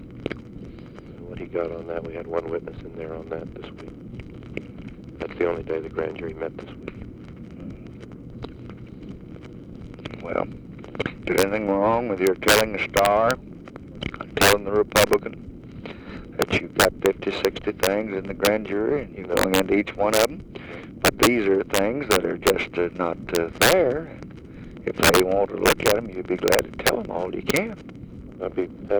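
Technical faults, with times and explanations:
Throughout: integer overflow. The signal is driven about 6 dB past full scale, and instead of being limited, the peaks that exceed the integer range wrap to the opposite sign. Only a small fraction of samples, well under one percent, cross over, so violent cracks land on the loudest moments rather than everywhere. Each is far harsher than ordinary clipping.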